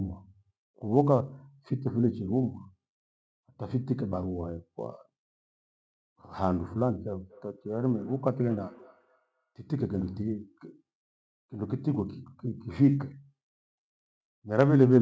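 From 7.2 to 10.25 s there's feedback echo between two devices: each word loops back roughly every fifth of a second, thin and ringing, peaking about 28 dB under the speech.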